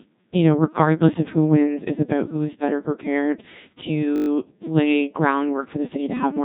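Throughout, the speech carries heavy Codec 2 vocoder damage. The decoder rebuilds the voice from sine waves driven by pitch, voicing and envelope data, so it sounds robotic and buzzy, with nothing above 3.8 kHz, which fits a low-rate mode near 1.6 kbit/s.

From 4.16 to 4.28 s a system hang loop replays one 20 ms slice about six times while the sound hardware cycles its buffer during a freeze. This produces a steady 50 Hz buzz in place of the speech, with almost no audio lost afterward.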